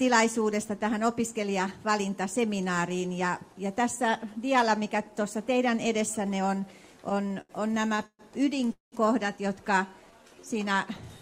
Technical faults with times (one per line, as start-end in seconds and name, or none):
7.09-8.21 repeated stalls (stutter)
8.72-8.94 call audio freeze
9.78-10.54 jitter buffer slow-down